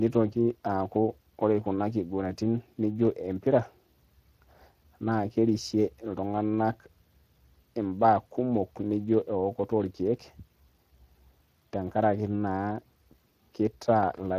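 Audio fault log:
throughout, Speex codec: the speech sounds noisy and hoarse, with plainly audible coding damage and nothing above 15.1 kHz. This CELP codec has too few bits to model the excitation cleanly, which fits a bitrate of around 22 kbps.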